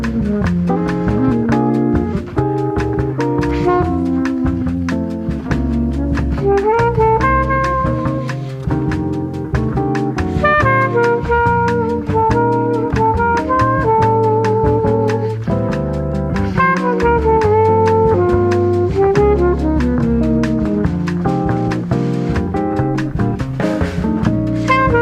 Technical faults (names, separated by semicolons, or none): none